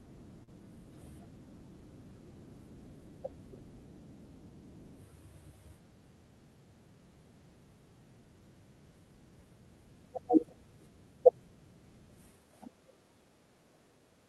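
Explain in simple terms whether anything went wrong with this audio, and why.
Near the very start, at about 0.43 to 0.49 s, the speech briefly smears and wobbles for a split second, and a small sound there may go missing. This is a short concealed packet loss: about 40 ms of audio didn't arrive in time over the call connection. The receiving end covered the gap by stretching out the sound just before it, then blended back into the real audio. The dull top end, with nothing above about 12 kHz, comes from the call's codec.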